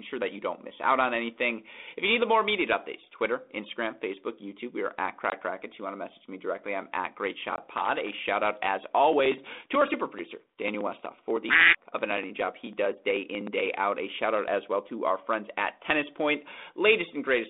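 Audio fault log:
5.30–5.32 s and 7.56–7.61 s, packet loss on an ADPCM call: after "we are at", and again later, about 20 ms of audio drops to hard-edged silence, which fits one lost packet each time. The receiver's adaptive predictor and step size lose track of the sender's, so the speech returns slightly distorted before settling.
7.77–8.19 s, loose connector crackle: just before "out as", a worn or dirty contact makes and breaks repeatedly, chopping the signal and popping any DC on the line. The result is an irregular burst of scratchy crackle lasting under half a second.
9.13–13.72 s, periodic USB or driver dropouts: from just after "out as", something stalls the audio bus or driver every 62 ms, skipping roughly 2 ms of signal each time, some seventy times. These evenly spaced cuts give steady ticks under the 32 kbit/s G.726 telephone-band speech.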